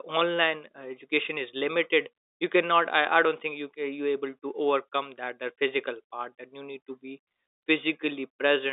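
Speech carried over a 64 kbps G.711 mu-law telephone path, band-limited to about 250 Hz to 3.7 kHz, with no technical faults to report.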